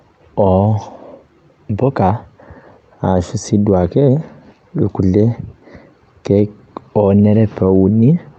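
Nothing goes wrong anywhere in this speech recording; it simply comes through an ordinary call link, with the top end trimmed back the way a call codec normally leaves it.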